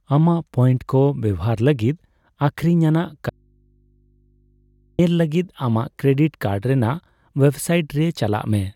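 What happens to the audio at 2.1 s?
Nothing goes wrong at 2.1 s; the speech runs on intact through that moment, with no dropout, click or distortion.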